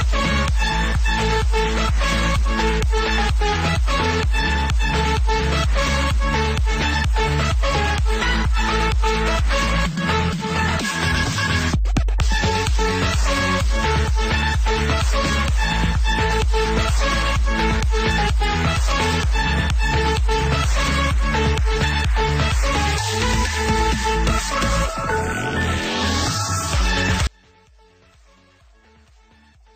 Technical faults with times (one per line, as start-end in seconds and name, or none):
27.27-29.75 audio dropout to a faint residue